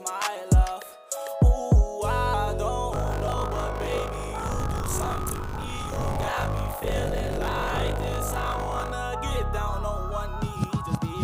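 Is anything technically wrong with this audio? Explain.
Yes. From 2.92 to 8.92 s there's buffer tearing: writer and hardware reader have slipped, so each 20 ms period carries roughly a third of audio from about 40 ms earlier, hard-spliced in. That gives a steady 50 Hz rattly buzz riding on the signal.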